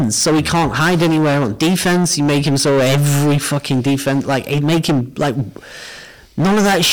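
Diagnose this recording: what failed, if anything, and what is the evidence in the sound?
Hard clipping runs through the whole speech recording. The signal is driven about 17 dB past what the converter or sample-format stage can pass, so nearly a third of the samples are cut flat, and every loud syllable carries a harsh, buzzy fuzz of added high harmonics.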